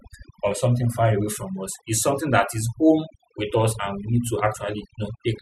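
Overdone noise removal runs through the whole speech clip, from start to finish. A noise reduction stage was pushed too hard on a noisy recording, so any frequency band it judged close to the noise level was pulled far down or switched off. Quieter parts of the voice fell below that line and were removed along with the noise. The gaps collapse into near silence dotted with twinkling specks.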